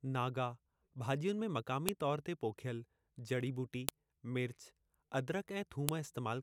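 Three sharp clicks land at 1.89, 3.89 and 5.89 s, spaced exactly 2 s apart, which is the giveaway for file header played as audio. The speech was evidently stitched together from 2-second WAV pieces without stripping each piece's header. Those few dozen bytes get read as sample values, so you hear a brief, loud snap at every join, cutting across the speech regardless of what's happening in it at that moment.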